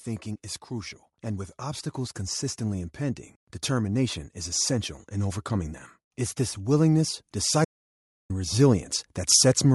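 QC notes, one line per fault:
Throughout: Bluetooth LC3 compression, plainly audible on this speech. The upper spectrum is thinned and partly filled with noise, giving a breathy, grainy edge. Unlike a plain low-pass, the top end hisses rather than simply vanishing, and this likely comes from LC3 at about 48 kbps with 7.5 ms frames.
0.68 to 4.25 s and 6.57 to 8.91 s: automatic gain rising. Level swells gradually by about 5 dB, then about 4 dB, as the gain control lifts a quiet input, with voice and background rising together. The first rise settles just before "is essential in overcoming". Unlike a fader move on the voice alone, the room noise climbs with it.
7.65 to 8.30 s: audio dropout to silence, lasting 0.65 s inside the second gain rise. The sound cuts out mid-flow to silence, with no room tone, then resumes. Unlike a pause in speaking, even the background vanishes, which points to a likely lost input writing silence.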